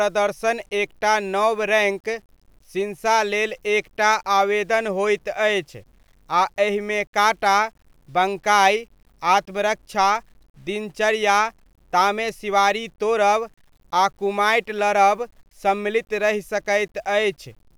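Low bit depth without dither runs through the whole speech clip: the audio was likely rounded to a coarse word length, consistent with about 9 bits, leaving error tied to the signal roughly 45 dB down, so quiet syllables and decays sound grainy and sputter toward silence.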